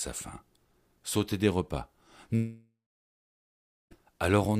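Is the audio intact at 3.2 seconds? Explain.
No. At 3.2 s the audio sits inside a long network dropout from 2.35 to 3.93 s, likely caused by packets that never arrived. The last sound is stretched into a fading buzz, then about 1.15 s of silence, and the missing 1.56 s is never recovered.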